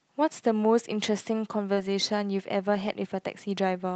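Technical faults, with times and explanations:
1.73–1.79 s, short concealed packet loss: about 40 ms of audio arrived too late, and the receiver extrapolated roughly 35 ms from the preceding sound, leaving a brief smeared wobble.
1.77–1.87 s and 2.75–2.89 s, lost packets rebuilt from error correction: low-bitrate backup copies replaced 60 ms and 80 ms of lost audio, which fits several 20 ms packets, so these stretches sound rougher and noisier without gapping.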